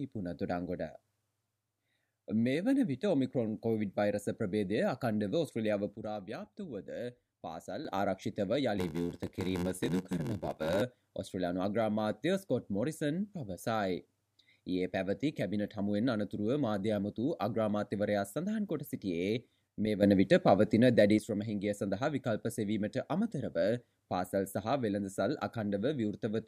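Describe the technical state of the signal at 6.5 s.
A sudden gain jump is in effect from 5.96 to 7.85 s, likely a gain change applied without a ramp, so sound and background noise drop together by about 8 dB.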